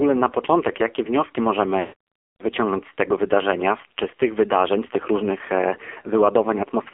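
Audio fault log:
throughout: AMR narrowband mobile codec. Speech was coded as AMR-NB at 5.9 kbps, a low rate where few pulses per subframe drive the vocal tract model, so the voice turns heavily buzzy and synthetic, confined to a 300 Hz to 3.4 kHz line band with nothing above 4 kHz.
1.80–1.93 s: lost AMR speech frames. A run of corrupted frames lasting 120 ms, which fits six 20 ms frames, made the decoder repeat the last pitch and vocal tract settings at falling gain, so after "na początek jakie wnioski" the sound smears and fades before "wyciągnąć z tego" returns rough.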